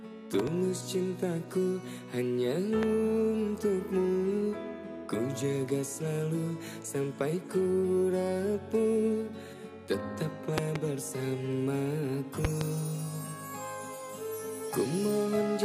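The audio has a loud pop fault: sharp pops jump well above the signal at 0.39–0.50 s, 2.83–2.85 s, 10.58–10.78 s and 12.45–12.64 s, mostly double hits, while the sound carries on underneath. That's likely a voltage spike from a plug, switch or static.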